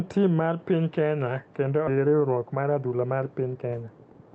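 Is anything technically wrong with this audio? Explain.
Yes, there are two timing faults in this speech.

At 1.87 to 1.89 s there is a skip ahead. The receiver discarded a stretch of audio, either lost on the way or thrown out by an overflowing jitter buffer, while later audio was already queued. Roughly 0.7 s of speech never plays, and nothing fills the gap. The speech jumps straight from one point to a much later one, with the two sides spliced almost directly and the missing material simply gone.

From 1.97 to 4.27 s there is a jitter buffer speed-up. The buffer was holding more audio than its target, so the receiver trimmed the backlog by repeatedly cutting out short pieces one or a few pitch periods long. Altogether about a fifth of a second is removed. The speech runs at about 110% speed with its pitch unchanged, so this whole final stretch sounds rushed.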